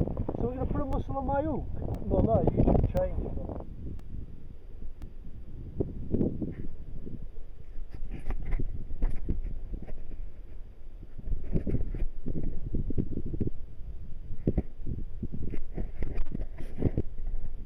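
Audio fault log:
0.93–5.02 s, periodic USB or driver dropouts: regular ticks every 1.024 s as a couple of milliseconds of audio drop to silence while the driver stalls.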